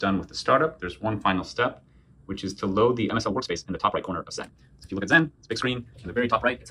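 At 3.07 s the audio was likely run through time-stretching software that sped it up to about 1.9 times, holding pitch by dropping short pieces. This time-stretched section runs to the end, where the pace jumps abruptly and sounds rushed at unchanged pitch.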